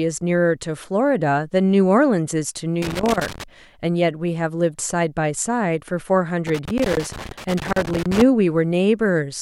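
A speech recording broken by two irregular bursts of crackle and scratching, from 2.82 to 3.44 s and from 6.47 to 8.22 s: loose connector crackle, where a worn or dirty contact keeps making and breaking, chopping the signal.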